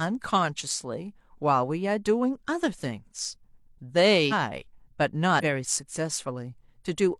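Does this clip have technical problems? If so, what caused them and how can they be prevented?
Yes. Compressed frames were skipped at 4.28–4.33 s and 5.39–5.43 s. Frames were missing or rejected as damaged, so the speech jumps ahead by roughly 400 ms and 200 ms, consistent with 46 ms frames. Verified file transfer and storage prevent this.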